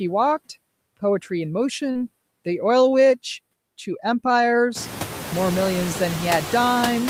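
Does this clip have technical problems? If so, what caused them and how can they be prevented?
Yes. Noise suppressor artifacts run throughout: the suppressor cuts steady noise by about 19 dB frame by frame, so the noise sinks between words and rises under them, and the room noise itself rises by about 20 dB around 5 s. Gentler suppression settings or a quieter room would prevent this.

Short concealed packet loss occurs at 1.91–1.98 s: about 40 ms never arrived and the decoder bridged roughly 35 ms by extrapolating the preceding sound, causing a brief smear. A larger jitter buffer or a more stable network would prevent it.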